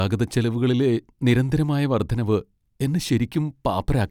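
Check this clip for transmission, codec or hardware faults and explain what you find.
No transmission, codec or hardware faults.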